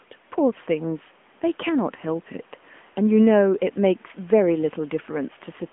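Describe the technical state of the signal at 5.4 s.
At 5.4 s the AMR narrowband mobile codec is still active, as it is throughout the clip. The speech is rebuilt from a vocal-tract model driven by sparse pulses, and the plainly audible buzzy, synthetic edge fits a mid-rate mode near 10.2 kbps. Nothing passes above about 3.7 kHz, leaving a telephone band of roughly 200 Hz to 3.4 kHz.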